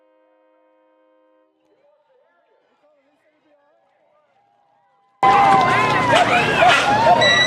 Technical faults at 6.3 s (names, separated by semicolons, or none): none